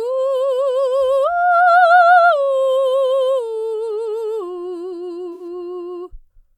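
A music clip with a damaged stretch from 5.33 to 5.43 s. It is a corrupt frame concealed: the decoder detected damaged AAC data spanning roughly three frames and papered over them itself.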